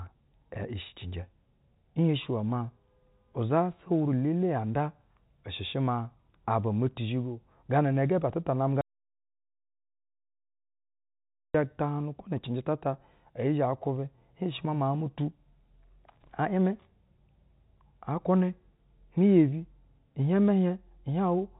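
At 8.81 s, just after "ba atɛ ta namɛ", the speech stops dead. This is an audio dropout to silence lasting 2.73 s, until 11.54 s. The gap is silent, with no room tone and no telephone-band hiss. The input was likely lost while recording continued. The speech in between is gone.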